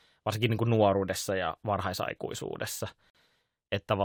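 At 3.10 s, right after "kuin nuoruudessa ja varhaisaikuisuudessa", the speech drops out for about 47 ms, ending near 3.15 s. This is a gap between stream segments: the timestamps of two consecutive chunks do not quite meet, so the player pads the missing span with silence. The stream is cut into 2-second segments. The hole has abrupt edges, heard as a brief hard cut in the speech. No audio is lost, only delayed.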